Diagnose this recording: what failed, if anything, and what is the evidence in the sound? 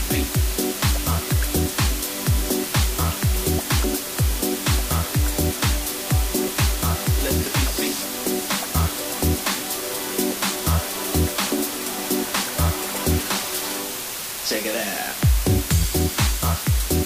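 The failure is at sample-format conversion: low bit depth with dither. For the full 17 seconds a constant, even hiss sits only about 5 dB below the sound, with no distortion. The audio was rounded to 4 bits with dither added first, turning rounding error into steady white noise.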